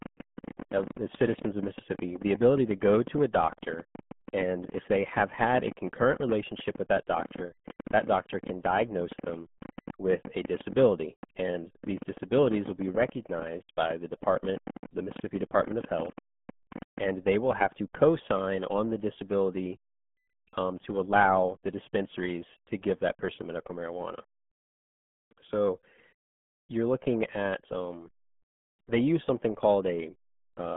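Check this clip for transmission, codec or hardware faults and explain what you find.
Two problems here: a heavily degraded low-bitrate codec across the whole clip, and a long run of clicks over the first half.

The RealAudio 14.4 codec is present throughout. It's an 8 kbit/s speech coder built for dial-up, and it works in a phone-style band of roughly 150 Hz to 3.4 kHz, with nothing above about 3.7 kHz. At that bitrate it can only keep a crude model of the speech, so the damage is heavy: the speech sounds muffled and gargly, with a watery, smeared quality and no sibilance or air at the top.

The train of clicks runs from about 0.02 s to 16.99 s and ends just before "and they will have". There are a couple of hundred of them, arriving at nearly 11 per second but at an uneven pace. They're all much the same shape and peak a few dB above the speech, so they tick and pop over it and through the pauses. 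The likely cause is interference from nearby equipment or a faulty connection or power supply injecting pulses.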